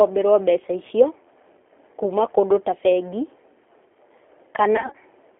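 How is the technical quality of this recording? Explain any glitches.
Quality is limited. Codec roughness runs throughout, and one brief glitch occurs near the end.

The G.729 codec is plainly audible for the whole clip. It rebuilds speech from a filter and pulses, so it sounds slightly synthetic, and the sound is band-limited to 300 Hz to 3.4 kHz.

From 4.76 to 4.96 s, there is VoIP packet loss concealed by the speech codec. About 120 ms is missing, in gaps up to 40 ms. The decoder extrapolates across them, so the speech is stretched into a fading buzz or coloured noise and stays weak just after.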